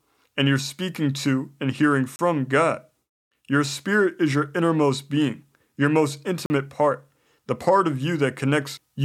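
At 2.16 s the speech drops into a block of digital silence lasting 30 ms, and a second block of 40 ms follows at 6.46 s. Samples were zeroed, probably because the output buffer was not filled in time, so the signal stops and restarts abruptly. Each is heard as a short hole. On a waveform they show as flat lines near zero; a spectrogram shows blank vertical strips edged by broadband lines.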